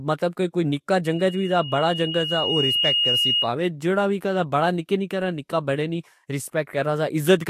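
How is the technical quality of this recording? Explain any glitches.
The recording has one clear glitch. From 1.04 to 3.51 s, loudspeaker feedback squeal: a 2.9 kHz tone swells over about two seconds, ending a few dB above the speech. It shows as a bright horizontal spectrogram line and a growing waveform envelope, as the mic re-amplifies its own speaker output.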